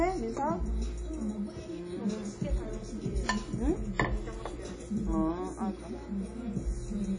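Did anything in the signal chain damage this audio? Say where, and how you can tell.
Yes, at the codec stage, throughout: a washy, ringing smear with hiss that breathes with the signal, and nothing above 10.1 kHz, pointing to a low bitrate near 32 kbps. Likely WMA compression; long transform blocks spread quantisation noise over tens of milliseconds, unlike a plain low-pass filter.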